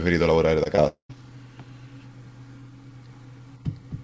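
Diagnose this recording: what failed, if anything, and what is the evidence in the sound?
Network stage, short concealed packet loss. Two brief gaps in the speech, at 0.64 to 0.67 s and 0.75 to 0.80 s, come through as quick smears rather than clean cuts. Each hole is about 20 ms of audio that missed the decoder's deadline. The receiver covered it by extending the preceding sound for roughly 14 ms and 24 ms respectively, then cross-faded back into real audio.

Network stage, long network dropout. From 0.88 to 1.11 s the signal turns into a synthetic continuation of the last sound that decays over about 215 ms and includes around 110 ms of silence. Speech then resumes further on, with roughly 220 ms never delivered. This pattern of a fading fill, a silent stretch and a jump forward is likely a burst of consecutive lost packets rather than a local fault. It sits on a G.722 call path whose band stops at 8 kHz.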